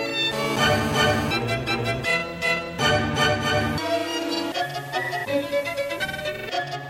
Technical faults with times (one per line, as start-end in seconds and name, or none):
0.32-1.31 GSM phone buzz
1.42-2.62 GSM signalling bursts
3.25-6.48 digital radio blending to analogue